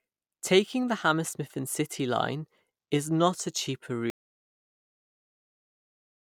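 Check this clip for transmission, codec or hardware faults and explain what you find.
One fault is present: an audio dropout to silence that begins at 4.1 s and runs to the end of the clip. The speech breaks off mid-phrase just after "is not a cheaper", and everything after that point is complete silence, with no room tone or noise floor. The likely cause is a lost input, such as a disconnected device, a failed link or an accidental mute, while the recorder kept writing silence. On a waveform the trace collapses abruptly to a flat line; on a spectrogram every frequency goes blank from 4.1 s onward.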